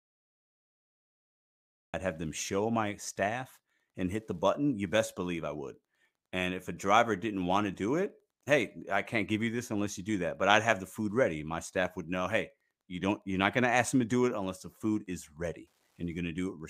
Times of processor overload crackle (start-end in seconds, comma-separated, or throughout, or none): none